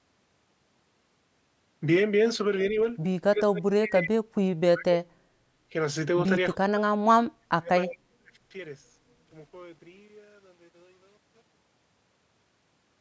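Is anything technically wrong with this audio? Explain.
Yes. From 3.31 to 5.13 s, 6.54 to 6.82 s and 7.39 to 8.33 s the voice sinks, thins and breaks up in pieces, by roughly 40 dB at worst. This is likely speech suppressed in double talk: the echo canceller mistook the talker for loudspeaker echo and turned everything down.

From 5.41 to 5.53 s the room sound briefly dips by about 8 dB, then returns. This is background gated by the echo canceller, which clamped the microphone down while the loudspeaker played and let go after about a tenth of a second.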